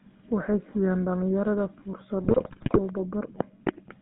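GSM full-rate codec coding runs through the whole recording. The speech passes through a model of the vocal tract driven by a sparse, regularly spaced pulse excitation. Only every third sample of that excitation survives, which gives the buzzy, gravelly roughness heard throughout. The band is held between about 150 Hz and 3.7 kHz, so everything higher is missing. The damage is plainly audible and fits the 13 kbps full-rate coder.

GSM bit errors break in from 2.24 to 2.79 s. Corrupted bits reach the decoder and scramble the values that shape the filter, set the pitch and control the gain. Frame after frame, the spectrum twists and the level jumps. Across that half second the speech dissolves into squawks, pops and gargling, the sound of a weak radio link with an error rate of around 5 percent.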